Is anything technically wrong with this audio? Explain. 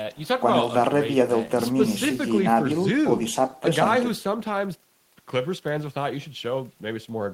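No, nothing in this speech recording stood out as a technical problem on listening.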